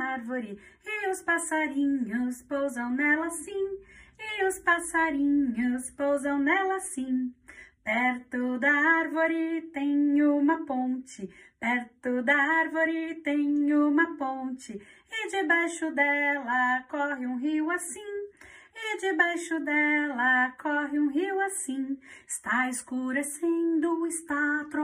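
Nothing here sounds wrong: there's no glitch, dropout or other technical fault to point to anywhere in the recording.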